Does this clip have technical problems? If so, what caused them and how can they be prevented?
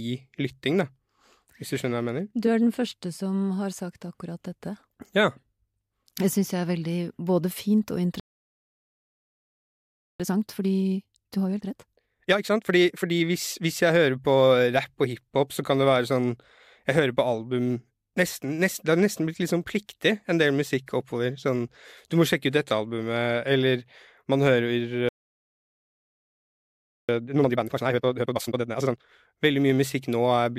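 Yes. A playback stall silences the speech for 2 s at 8.20–10.20 s and 25.09–27.09 s, appearing as flat, empty gaps in the waveform. The likely cause is a starved or blocked player thread. Deeper buffering and a higher-priority audio thread would prevent this.

Time-compressed catch-up follows each stall, hurrying speech at normal pitch: 1.5 times speed at 10.20–13.20 s, 2 times at 27.09–29.09 s. The spectrogram shows squeezed syllables. Smaller compression ratios spread over longer spans would hide this.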